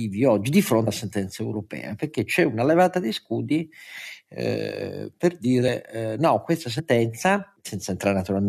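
Jumps at 0.86 s (after "oggi di", about 150 ms lost), 5.67 s (after "eh per", about 100 ms) and 6.78–6.80 s (after "no questa", about 70 ms) are compressed frames skipped. Whole frames were dropped, which fits a frame length of about 23 ms, so the speech jumps ahead.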